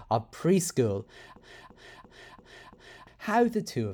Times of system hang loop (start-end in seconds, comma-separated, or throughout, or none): 1.37-3.07